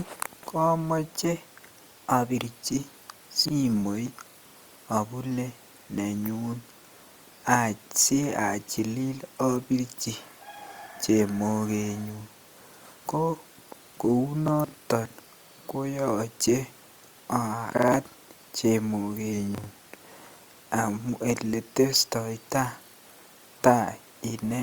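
Drift correction steps at 1.06–2.36 s and 19.33–20.20 s: the speech jumps about 5.8 % faster and a semitone sharp, then 5.8 % slower and a semitone flat, each snapping back afterwards, likely from clock-matching software abruptly changing playback rate to rebalance its buffer.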